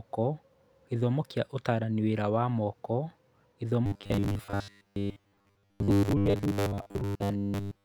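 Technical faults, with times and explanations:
3.86 to 7.84 s, robotic sound from repeated short buffers: new audio likely arrives too seldom, so a 10 ms chunk is replayed for most of this stretch while real speech is skipped, turning the voice into a rigid, metallic 100 Hz buzz that loosely tracks the words.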